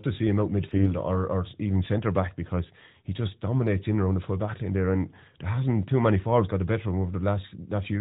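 AMR bit errors hit at 0.72–0.93 s, after "to see him out", and at 3.55–3.65 s, after "back because he just". Weakly protected bits in the narrowband mobile frames arrived flipped, misplacing excitation pulses and skewing fine gain and spectral values. Pitch and level hold, but the speech turns hoarse and gargly.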